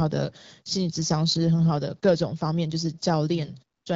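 No technical faults are audible.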